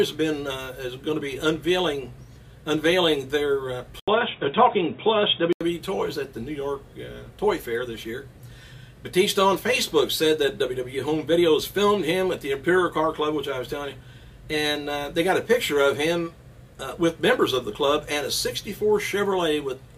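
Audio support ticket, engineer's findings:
Dull, boxy sound from 4.00 to 5.61 s, nothing above 3.8 kHz, level shifted by about 5 dB, faint new noise floor, 80 ms silence at the switch. Likely input switched to a poorer device with a narrower band and different gain, then restored.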